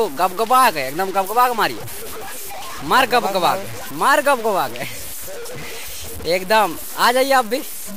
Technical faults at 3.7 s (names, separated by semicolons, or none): low bit depth without dither